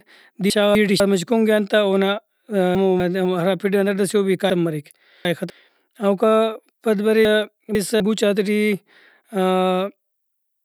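Chunks out of order at 0.5–1.0 s (before "کُنگ ایہان تہ اونا"), 2.75–3.25 s (before "ہرا پھڈ ئنا"), 4.5–5.5 s (after "سے او بھی") and 7.25–8.0 s: a 250 ms block arrives one to three slots late. The speech jumbles, yet unlike a dropout nothing is missing.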